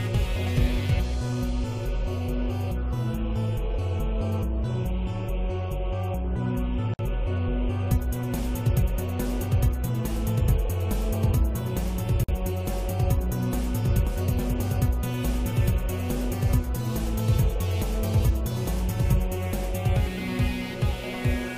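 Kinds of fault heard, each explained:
Gap at a join of encoded pieces: the audio seems to have been encoded in separate chunks and stuck together without trimming, so each join keeps the encoder's start-up delay and end-of-file padding as dead air. You hear it twice, a 54 ms hole at 6.94 s and a 50 ms one at 12.24 s, where the sound just drops out with smeared edges and then picks up right where it left off.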